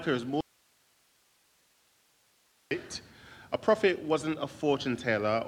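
At 0.41 s the sound cuts out abruptly, and it returns at 2.71 s. This is an audio dropout to a faint residue lasting about 2.3 s. Only hiss fills the gap, roughly 40 dB below the signal. The likely cause is signal loss upstream while the later path stayed live.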